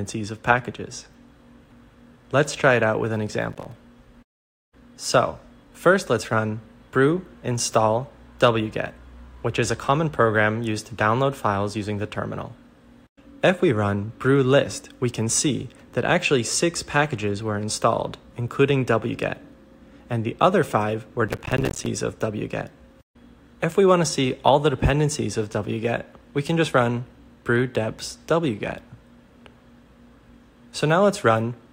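At 3.50 to 3.72 s, and again for longer at 21.28 to 21.86 s, there's processor overload crackle. The machine keeps missing its deadlines on tiny buffers, around 5 ms each, and drops silent gaps in, so you get a gritty tearing burst over the sound.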